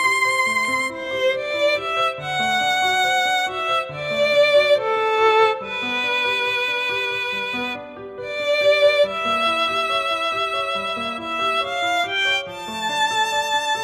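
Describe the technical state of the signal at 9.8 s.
At 9.8 s the signal is intact, with no audible technical fault at that point.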